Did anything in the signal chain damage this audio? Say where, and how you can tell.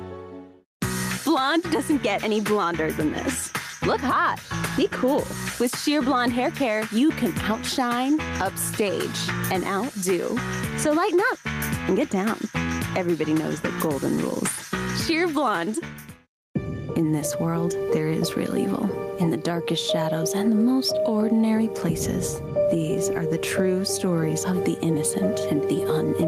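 Yes. Throughout the clip the gain swings by around 10 dB, bringing loud and soft parts closer in level and leaving the audio squashed. This gain pumping likely comes from input gain set far too high, with a fast limiter or compressor clamping every peak.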